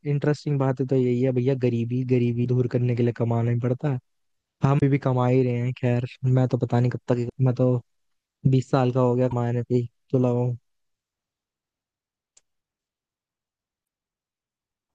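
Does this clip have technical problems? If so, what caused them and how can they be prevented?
Yes, there's damaged data in the compressed stream. You get five brief glitches, each about 50 to 65 ms long, at 2.41–2.46, 4.77–4.83, 7.26–7.32, 9.28–9.33 and 13.81–13.86 s. At each spot some of the encoded bytes were corrupted, so the decoder couldn't make sense of those frames and had to hunt for the next valid header. That's what produces the little chirp or blip in the speech. To prevent it, transfer and store the file with checksums, and use a container with error detection or redundancy so bad frames get caught before playback.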